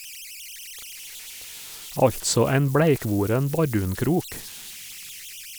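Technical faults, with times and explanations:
Throughout: converter idle tones. With no dither, the delta-sigma converter locks into repeating bit patterns at low levels, leaving a whistle around 3 kHz in pauses and grain under quiet speech, about 18 dB down. A spectrogram shows a horizontal line near 3 kHz, plainest in gaps.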